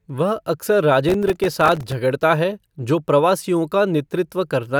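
From 1.09 s to 1.92 s the speech is covered by processor overload crackle. It ends just before "है जो प्रवासियों". The processor could not finish its audio buffers in time, and dozens of deadlines were missed again and again across that stretch. Each buffer here is very short, around a millisecond and a half. Every miss drops in a sliver of silence with hard edges. Packed together, these gaps sound like gritty, tearing crackle over the speech. It stops once the load passes.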